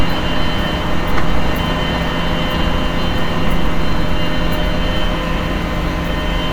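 No technical faults are audible.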